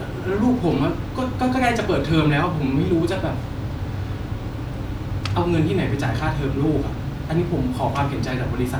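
No technical faults are audible.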